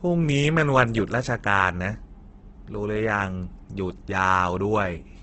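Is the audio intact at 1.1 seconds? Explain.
No. At 1.1 seconds the speech carries heavy Opus compression, which runs through the whole clip. The sound is rough and grainy, with noise-like texture where clean harmonics should be. The likely cause is an Opus encoder in its CELT music mode at a very low rate, near 12 kbps. It keeps each band's energy but fills starved bands with folded or noise content. On a spectrogram, harmonics smear into speckled noise, and everything stops near 8 kHz, which fits wideband operation.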